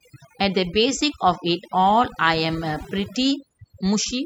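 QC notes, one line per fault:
Throughout, overdone noise removal: the background drops and breaks up into twinkling specks. A noise reduction stage set far too strong is cutting individual frequency bands whenever they sit near its noise estimate, taking the quieter parts of the speech with them.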